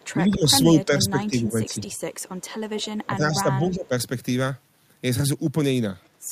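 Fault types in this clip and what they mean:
Echo leak: A copy of the speech, about 20 to 40 dB below it, trails it by about 190 to 200 ms. It is likely loudspeaker pickup the echo canceller missed.
Speech suppressed in double talk: The speech dips by up to about 10 dB at 0.15–1.81 s and 3.08–3.93 s. Overlapping talk likely confused the canceller.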